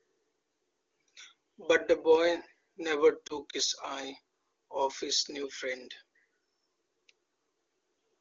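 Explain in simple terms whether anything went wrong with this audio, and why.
There's one quick glitch: around 3.28 to 3.36 s the speech briefly dips and warbles, the mark of lost AMR speech frames. A radio error spoiled what sounds like a single frame, so the HD Voice decoder filled the gap by replaying its last good settings, only quieter.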